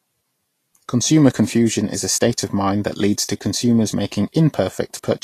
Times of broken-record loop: none

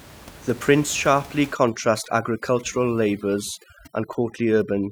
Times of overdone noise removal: 1.53-4.91

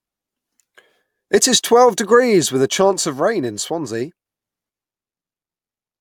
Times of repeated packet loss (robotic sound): none

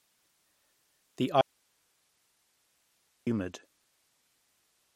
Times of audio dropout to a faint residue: 1.41-3.27

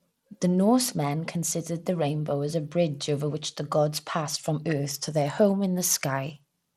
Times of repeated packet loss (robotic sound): none

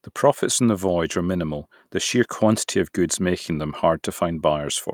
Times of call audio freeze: none

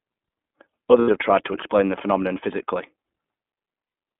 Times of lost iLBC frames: 1.00-1.10, 3.88-3.94

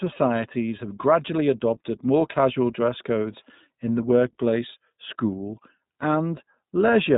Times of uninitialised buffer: none

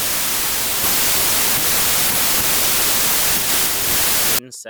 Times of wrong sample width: 0.00-4.39

